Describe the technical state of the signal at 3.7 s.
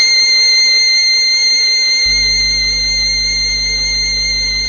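At 3.7 s the music sounds dull and smeared, with a warbling, fizzy texture on sustained tones and nothing above about 6.6 kHz. This is AAC compression present across the whole clip, likely from AAC-LC at a low bitrate around 24 kbps. The encoder quantised each frame's frequency lines coarsely against its hearing model and lowered the cut-off, leaving gaps in the spectrum that blur the top end and make it shimmer.

A steady low drone also sits under the music here. This is mains hum at 50 Hz with some low harmonics, running from 2.06 s to the end of the clip, roughly 15 dB below the music. It comes from the power line leaking into the signal path through a ground loop or a nearby transformer, adding a constant tone that the music itself doesn't contain.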